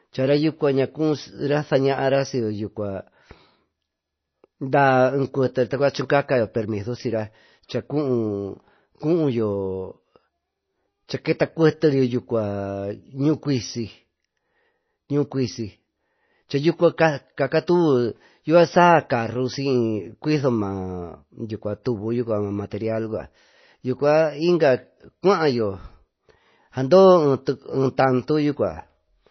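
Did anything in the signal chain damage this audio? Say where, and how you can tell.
Yes, at the codec stage. Throughout, the sound is cut off sharply above 6 kHz, with plainly audible watery, swirling damage, likely from MP3 compression at a low rate that fits around 24 kbps. A simple low-pass filter would leave no such swirl, because it doesn't switch frequency lines on and off between frames.

The same codec produces pre-echo at 21.84 s, where a short hiss spreads about 19 ms ahead of an attack, and the attack itself sounds softened. A click or dropout would sit at the attack or after it. Here the noise arrives before the attack because the transform block spread its quantisation noise backwards in time.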